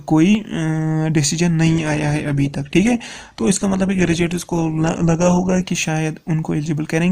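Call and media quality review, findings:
Adaptive stream at a lower bitrate, 1.66–5.66 s: abrupt quality drop without gap, nothing above 12.4 kHz, more codec artefacts. Player switched to a lower-bitrate rendition, consistent with Opus falling from 64 to 16 kbit/s.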